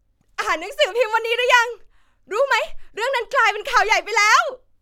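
No technical faults are audible anywhere in the recording.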